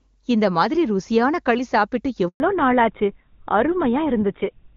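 A handover gap runs from 2.28 to 2.4 s, right after "களி சாப்பிட்டு". The call was being passed from one network link to another, and for those 120 ms no speech frames reached the decoder. The sound dies away within a few tens of milliseconds and leaves a short hole of silence until the new link delivers audio again. Whatever fell inside that stretch is simply missing rather than smeared or distorted.

A fallback to narrowband starts at 2.4 s, directly after the gap, and lasts to the end of the clip. Before the switch, the HD Voice wideband path carries the speech cleanly, with little or no codec damage at what sounds like its top rate. Once the new link takes over, the call is running on an older narrowband codec, and the sound points to GSM full rate. Nothing above 4 kHz survives, so the voice turns abruptly duller and rougher, losing its crisp sibilants and air.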